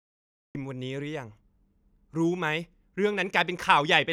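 For the first 0.55 seconds there is nothing but digital silence, and then the speech appears abruptly at 0.55 s, already mid-sound, with no natural attack or fade-in to lead into it. This is a cut-off start. Capture or streaming only began once the talker was already under way, so the opening of that sound was never recorded and the audio jumps straight from silence into the middle of it.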